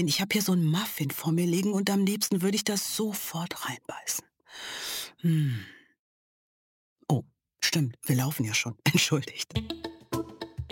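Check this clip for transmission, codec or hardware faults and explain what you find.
One fault runs through the whole clip. Crude rate conversion throughout: samples appear repeated rather than filtered, which fits a 44.1 kHz to 48 kHz change, leaving a gritty, inharmonic fizz roughly 20 dB below the sound.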